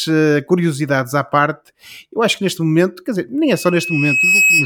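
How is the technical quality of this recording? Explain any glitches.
The recording has one clear glitch, a feedback squeal that takes over its final stretch. Loudspeaker feedback squeal starts at 3.49 s, right after "momento quer dizer nem", and runs to the end of the clip. The microphone was picking up the loudspeaker it fed, and around 2.6 kHz the loop gain rose above one, so that frequency kept recirculating and growing. It is heard as a pure tone that swells over roughly a second until it sits about 5 dB above the speech.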